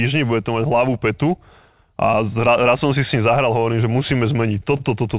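From 3.72 to 4.82 s, just after "si s ním zahral", the speech shows scattered short gaps: about seven lost or late packets, each patched by extending the preceding sound. The gaps total roughly 70 ms, the longest around 40 ms, and they are heard as brief ticks and smeared hiccups against a band limited to 4 kHz, which fits the G.711 call path.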